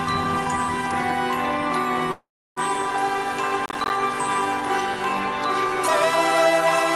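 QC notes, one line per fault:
2.11–2.59 s, call audio freeze: sound halts, leaving about 0.32 s of flat silence, likely from delayed packets draining the jitter buffer; waveform shows a gap, then resumes.
3.66–3.90 s, processor overload crackle: gritty tearing from missed roughly 10 ms buffers replaced by silence; waveform shows dense tiny dropouts, spectrogram thin vertical broadband streaks.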